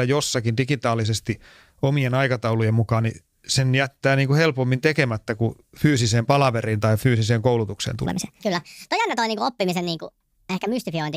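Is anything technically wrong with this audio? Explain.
Yes. A section at the wrong speed runs from 8.06 s to the end at 11.17 s, just after "palaveriin tai fyysiseen koulutukseen". Played about 1.49 times too fast, likely from a clock mismatch, the speech turns hurried and rises roughly seven semitones.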